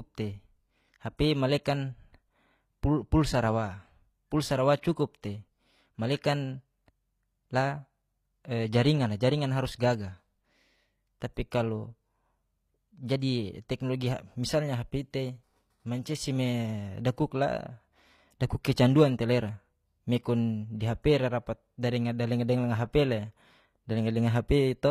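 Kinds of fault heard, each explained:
HE-AAC compression: Plainly audible codec damage throughout. The treble is likely rebuilt from copied lower bands rather than the original, which fits roughly 24 kbps.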